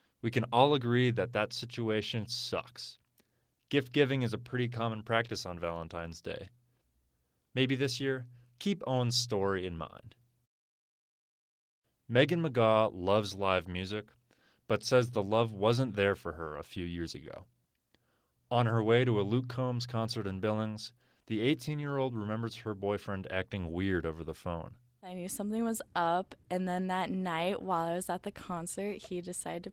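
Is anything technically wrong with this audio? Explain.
No, nothing in this speech recording is technically wrong.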